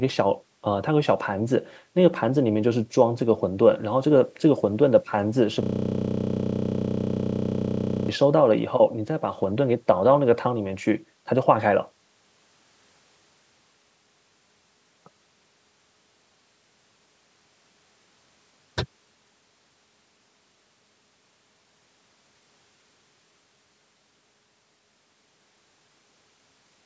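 At 5.63 s the sound locks into a system hang loop that lasts until 8.09 s. The computer or its driver stalled, but the sound hardware kept replaying its ring buffer. One 32 ms slice of speech repeats exactly, about 77 times. That gives a loop rate of 31.2 Hz, which fits a 512-sample buffer. The result is a rough, steady buzz rather than a stutter. The call processing's band limit leaves nothing above 8 kHz throughout.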